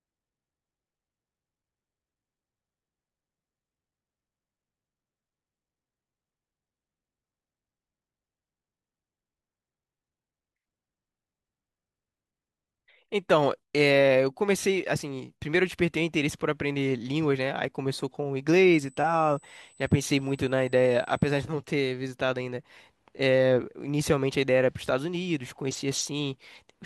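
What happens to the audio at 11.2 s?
Nothing goes wrong at 11.2 s; the speech continues cleanly through that point with no dropout, click or distortion.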